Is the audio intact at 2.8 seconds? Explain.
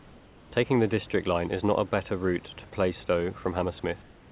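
Yes, the audio is intact at 2.8 seconds, with no dropout, glitch or distortion at that moment.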